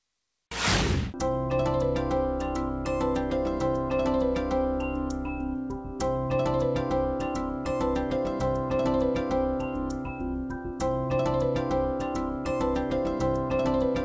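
Nothing is technically wrong with this audio, which comes through a G.722 call path at 64 kbps with nothing above 8 kHz.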